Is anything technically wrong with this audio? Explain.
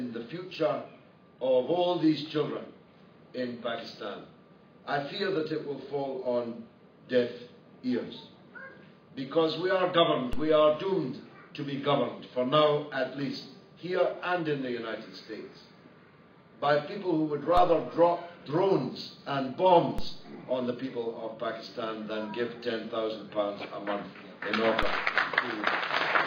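Yes. There are four DC steps, at 10.33, 17.57, 19.98 and 24.83 s. At each one the waveform's zero line suddenly jumps by about -22 dBFS. The offset does not hold. It drains away as a 2 Hz high-pass lets it decay. Each step is heard as a low thump or click. The sound itself carries on unchanged underneath. The problem lies in the baseline, not in the audio content.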